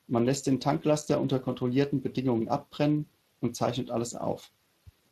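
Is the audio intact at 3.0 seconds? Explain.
No. At 3.0 seconds the speech carries Speex codec damage, and it runs through the whole clip rather than just that moment. Speex is a CELP coder: it models the vocal tract and spends a limited bit budget on the excitation signal driving it. Here that budget, which points to a setting somewhere around 22 kbps, leaves the excitation coarse, so the speech comes across plainly hoarse and grainy.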